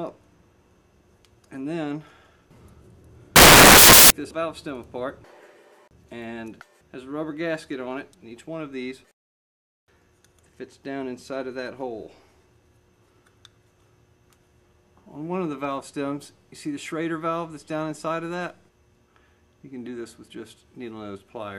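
Samples built from the wrong bytes, from 3.36 to 4.10 s: for about 0.74 s the bytes making up each sample are put together wrongly, whether shifted by one byte, swapped in order or read with the wrong alignment. The rapidly changing low-order bits end up as the most significant part of every value, so the sound turns into loud, harsh broadband noise, close to white where the underlying audio is loud.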